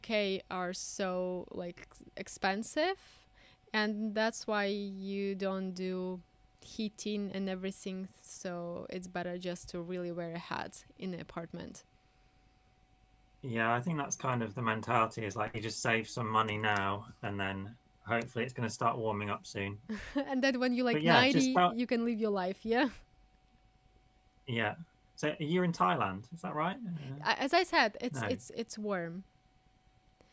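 Nothing stood out as a technical fault anywhere in this audio on listening.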